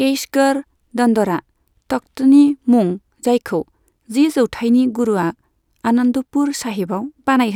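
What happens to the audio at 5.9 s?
At 5.9 s the speech runs on intact, with no dropout, click, distortion or other fault at that point.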